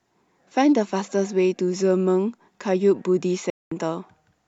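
At 3.50 s the speech drops out completely. Silence holds for about 213 ms, and the sound returns at 3.72 s. This is a Bluetooth stall, likely caused by radio interference. Packets were held up on the wireless link. The headphones' small playback buffer emptied before they arrived. Output simply paused, then carried on once the delayed data came through.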